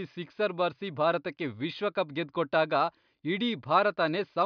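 No technical faults can be heard anywhere in the speech recording; the signal stays continuous and intact throughout.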